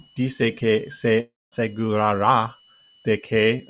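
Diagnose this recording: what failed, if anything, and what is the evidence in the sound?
A faint, steady high whistle near 3 kHz, wandering between about 2.88 and 3.08 kHz, sits about 35 dB below the speech for the whole recording. This is a switching supply whistle entering through the analogue wiring: the power supply's burst-mode cycling, or its beating with another supply, leaks audibly into the signal.

Right after "dice que", from 1.2 to 1.54 s, the speech gives way to a fading continuation of the last sound and then silence, and it resumes with a stretch missing. This long network dropout was likely caused by lost packets that the receiver's concealment papered over, within the call path's 4 kHz band.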